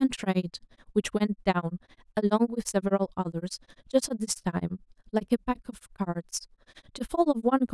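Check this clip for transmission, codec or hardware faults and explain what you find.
One fault is present. Overlap-add ripple runs throughout: frames were rejoined with overlaps not summing to constant gain, so level swings about 60 dB around ten times a second, giving the speech a rough flutter.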